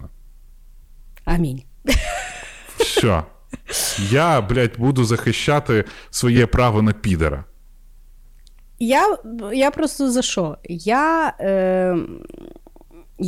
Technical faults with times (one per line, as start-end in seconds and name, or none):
1.89-1.96 hard clipping
2.80-3.20 hard clipping
4.13-5.81 hard clipping
6.24-7.28 hard clipping
6.36-6.40 repeated frames
8.91-9.06 hard clipping
9.60-10.26 hard clipping
10.91-11.06 hard clipping